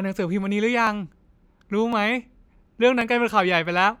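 Speech with three sharp clicks at 0.87, 1.93 and 3.01 s, likely dropped samples: under a millisecond lost, so no sound goes missing, unlike an audible dropout.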